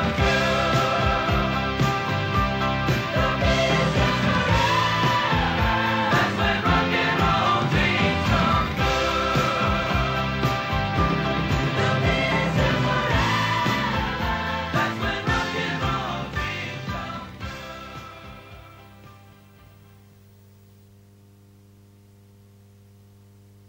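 No technical faults can be heard anywhere in the audio.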